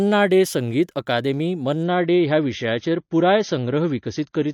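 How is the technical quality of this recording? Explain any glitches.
The recording's quality falls partway through. An adaptive stream at a lower bitrate takes over at 1.83 s, just after "डे संगीत अकादेमी", and lasts to the end. The slowed connection forced a switch to a leaner encoding, which fits a step from about 128 to 32 kbit/s MP3. The treble abruptly vanishes above 6.6 kHz and codec artefacts rise, with no gap at the changeover.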